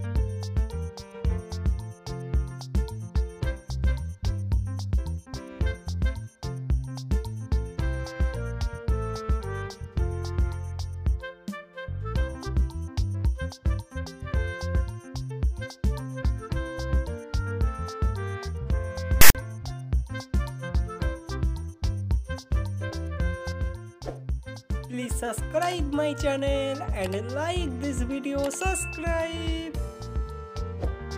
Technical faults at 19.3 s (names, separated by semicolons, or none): file tags played as audio